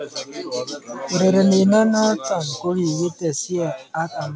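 At 2.28 s the speech and the background drop together by about 5 dB in a single step and stay there, which is likely a microphone volume stepped down by the call software. Unlike a gradual fade or compressor gain-riding, the level change is abrupt and never recovers.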